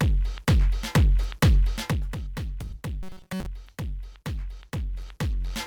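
From 3.03 to 3.46 s the sound collapses into a rigid metallic buzz at 188 Hz, robotic sound from repeated short buffers, likely from roughly 5.3 ms chunks looped while most of the real audio is skipped. A spectrogram shows evenly spaced harmonics at 188 Hz multiples; the waveform shows identical repeating cycles.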